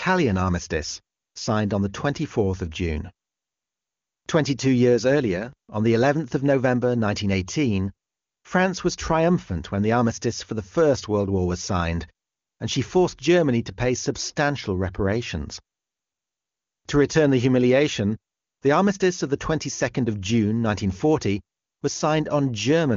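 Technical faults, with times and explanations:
No faults turn up anywhere in the clip; it's just wideband AMR HD Voice at what sounds like its top 23.85 kbit/s rate, with the usual ceiling near 7.1 kHz.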